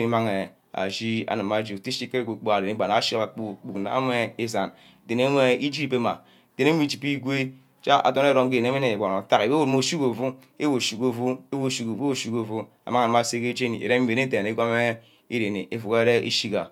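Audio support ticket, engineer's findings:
No audible defects found in the speech recording on review, so no component or mechanism to flag.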